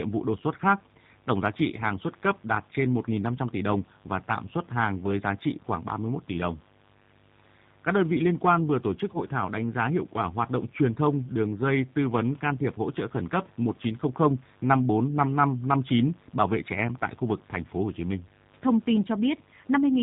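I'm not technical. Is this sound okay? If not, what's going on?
No. A steady, raspy buzz runs underneath the whole recording. That is mains buzz: electrical interference from the 50 Hz power supply leaking into the audio.

The speech also sounds slightly rough, thin and synthetic throughout. That comes from the G.729 codec, a phone-call compression system that rebuilds voices cheaply and removes the higher frequencies.

Twice the speech briefly smears into a short, fading blip: at about 1.76 to 1.82 s, between "giá trị" and "xuất cấp đạt trên", and at about 9.13 to 9.19 s, between "quan vừa tổ chức" and "thảo đánh giá hiệu". This is VoIP packet loss concealed by the speech codec. A tiny piece of the call, about 10 ms, went missing, and the decoder filled the gap by guessing from the sound just before it.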